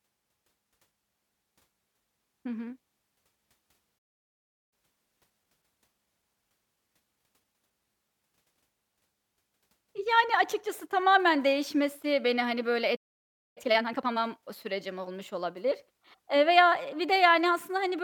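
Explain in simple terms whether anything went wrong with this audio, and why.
Something did go wrong, twice. The speech cuts out into silence at 3.98 s for about 0.74 s, and again at 12.96 s for about 0.6 s. Each is a playback stall. The player likely ran short of data or was held up, so the sound stopped until it recovered.

After each stall comes time-compressed catch-up. The player trims its backlog by removing tiny slices and blending the joins. From 4.73 to 7.73 s the speech runs 1.1 times faster. From 13.58 to 14.18 s it runs twice as fast. The pitch stays normal, but it sounds hurried.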